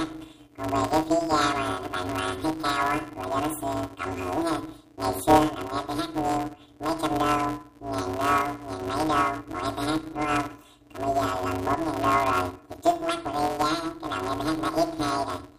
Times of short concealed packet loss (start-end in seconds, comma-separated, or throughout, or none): none